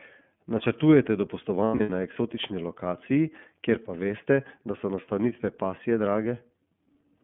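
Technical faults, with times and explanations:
throughout: iLBC codec. The audio is confined to a telephone band of roughly 150 Hz to 3.4 kHz, so everything above about 3.4 kHz is missing and the low end is thinned. Each frame's excitation is coded on its own, and at this rate the coding damage is plainly audible as a rough, slightly synthetic texture on the speech. The frame timing and quality fit iLBC's 30 ms mode at 13.33 kbps.
1.65 to 1.89 s: lost iLBC frames. About 180 ms of audio is missing, scattered across a 240 ms stretch, which points to six lost 30 ms frames. The longest unbroken gap lasts about a tenth of a second. The decoder fills each gap by repeating the last pitch cycle blended with noise, so these spots sound like a held, faintly buzzy or breathy vowel. Because iLBC frames do not depend on earlier ones, the sound recovers almost immediately after each gap.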